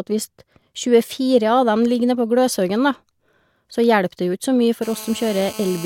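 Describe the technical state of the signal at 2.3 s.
At 2.3 s the speech signal is intact, with no audible dropout, distortion, glitch or other fault at that moment.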